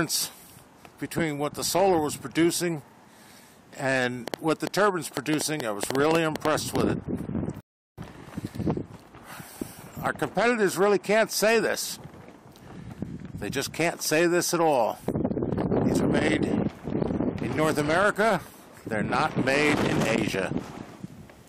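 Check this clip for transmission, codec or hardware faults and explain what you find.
Two faults are present: a train of clicks and a rebuffering stall.

From 4.28 to 6.82 s there is a train of clicks, likely from electrical interference or a faulty connection or power supply injecting repeated pulses. About fifteen similar clicks arrive at an uneven pace, roughly six per second, peaking about 20 dB above the surrounding sound.

At 7.61 s a rebuffering stall occurs. The player exhausted its downloaded audio and halted until more data arrived. The sound drops to silence for 0.37 s, then resumes exactly where it stopped. Nothing is skipped, but the playback is stretched.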